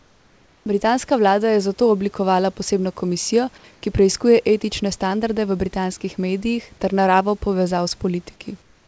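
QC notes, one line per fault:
0.00–0.66 s, 3.74–3.82 s, 8.62–8.87 s: comfort noise in place of the background. In these pauses, including the one before "vlada je zato oblikovala", the room background, already about 36 to 37 dB below the loud passages, gives way to a smooth, featureless hiss. It drops about 4 dB in the first and last gaps and about 1 dB in the short middle one. This is likely discontinuous transmission, with the receiver synthesising shaped noise until the sound resumes.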